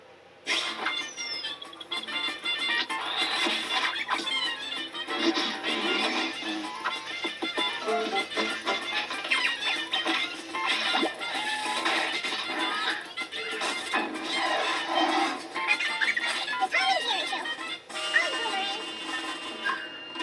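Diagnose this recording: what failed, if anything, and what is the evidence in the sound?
The playback stage ran at the wrong sample rate. From start to finish, the sound runs 1.5 times too fast and sits about 7 semitones high. Tempo and pitch shift together by one ratio, which fits 16 kHz material played at 24 kHz without conversion.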